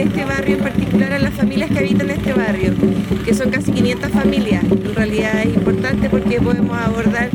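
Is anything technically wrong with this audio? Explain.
No, nothing technically wrong turns up anywhere in this audio.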